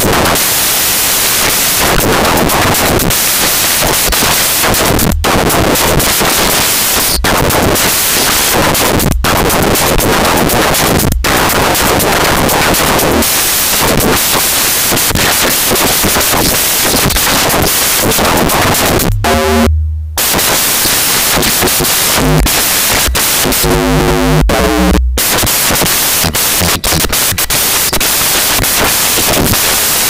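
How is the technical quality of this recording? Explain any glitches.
The technical quality is poor, because the whole recording is affected by one fault. Samples built from the wrong bytes, throughout the clip: the reader assembled each sample's bytes incorrectly, whether offset by a byte, in swapped order or at a mistaken alignment, so the rapidly changing low bits dominate every value. The result is loud, harsh broadband noise in place of the intended audio.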